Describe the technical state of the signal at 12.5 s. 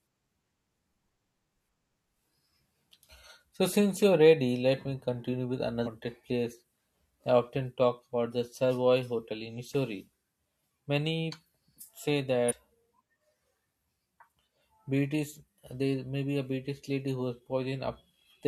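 Right there you've got damaged data in the compressed stream, from 12.48 to 12.53 s: corrupt frames throw the decoder off sync, giving a brief glitch.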